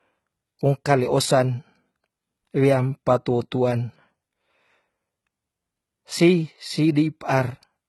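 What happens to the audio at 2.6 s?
At 2.6 s the speech carries likely HE-AAC compression, present throughout the clip. Treble up to 11.8 kHz is rebuilt from lower bands, so sibilants sound gritty and metallic rather than simply dull, pointing to a very low bitrate near 16 kbps.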